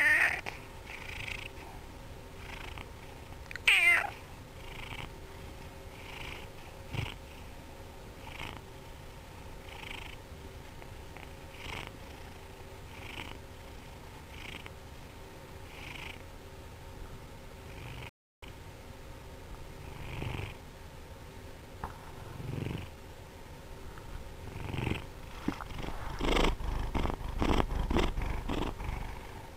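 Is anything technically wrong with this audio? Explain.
Yes. A rebuffering stall at 18.09 to 18.43 s: the player exhausted its downloaded audio and paused until more data arrived. The sound drops to silence for 0.33 s, then resumes exactly where it stopped, so nothing is lost but time is added.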